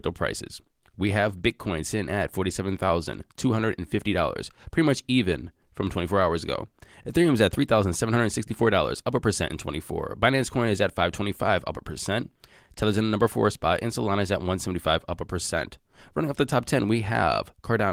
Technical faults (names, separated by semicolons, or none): none